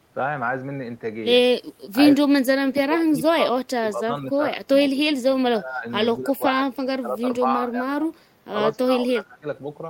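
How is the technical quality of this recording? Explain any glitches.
The speech is repeatedly pushed down by speech suppressed in double talk, at 2.18–3.57, 3.82–4.38, 4.56–4.71, 4.91–5.05, 5.52–5.85, 6.16–8.26 and 8.74–9.46 s. The level dips by roughly 10 to 30 dB, deepest early on, and some passages nearly vanish. The likely cause is an echo canceller failing to separate the local talker from overlapping far-end echo and attenuating everything.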